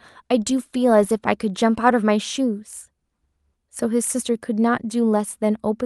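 No technical faults are audible.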